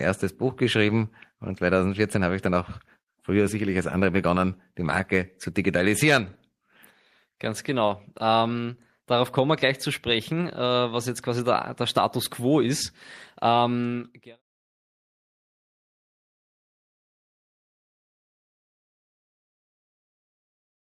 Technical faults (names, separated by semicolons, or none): none